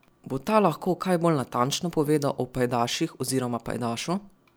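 No technical faults can be heard anywhere in the speech recording.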